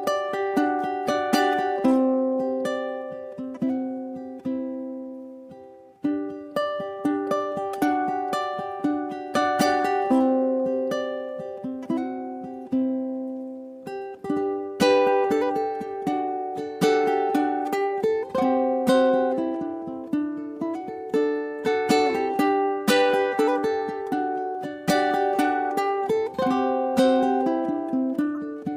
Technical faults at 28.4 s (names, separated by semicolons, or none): corrupt frame decoded